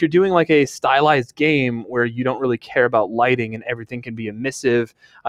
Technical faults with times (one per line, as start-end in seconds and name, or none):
0.00-5.29 noise suppressor applied to music or sounds
3.58-4.14 sound cut by the noise suppressor
4.86-5.25 sound cut by the noise suppressor